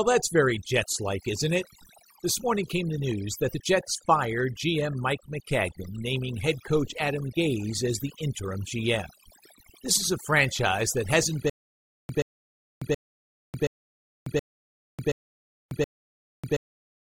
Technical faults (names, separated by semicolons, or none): overdone noise removal; stutter with silent gaps